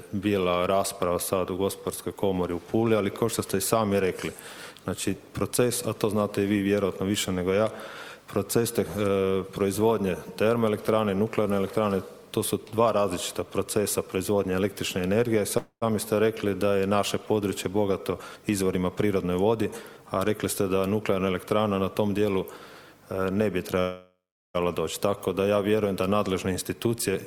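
At 15.57 s the sound stalls into a fading buzz that drops to near silence for about 90 ms before resuming at 15.84 s. This is a call audio freeze, likely from delayed packets emptying the jitter buffer. The receiver stretched the last sound to fill 242 ms, so nothing is lost but a gap is inserted.

From 17.66 to 20.05 s the audio runs about 10% fast at unchanged pitch and sounds hurried. This is a jitter buffer speed-up: to trim excess stored delay, the receiver cut many pitch-period slices, roughly a third of a second in total.

A longer call audio freeze spans 23.80 to 24.56 s, with 748 ms of fill and about 380 ms of silence.

A milder jitter buffer speed-up, about 7%, follows from 26.14 to 27.16 s and removes only a small fraction of a second.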